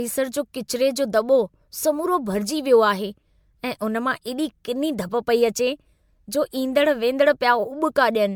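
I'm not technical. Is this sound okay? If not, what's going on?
No. The speech suffers from generation loss throughout, most likely because it was compressed, unpacked and compressed again roughly seven times, in a way that points to MP3. Each round throws away slightly different detail, and those small losses pile up. The speech sounds swirly and hollow, as if heard through a tube, with a watery smear around it, and the starts of sounds lose their crispness and blur together.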